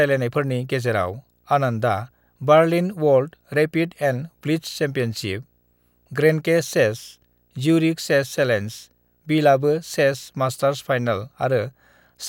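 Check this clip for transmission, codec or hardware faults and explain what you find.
There's one fault here, and it runs the whole way through: video or display buzz. Under the speech there's a steady buzz at 59.94 Hz, the field rate of an NTSC-style picture, with a gritty hash sitting above it, plus a thin whine at 15.7 kHz from the line scan. It's a screen or video cable leaking into the audio path. It's faint, roughly 45 dB below the speech, so you'll catch it most easily in the pauses.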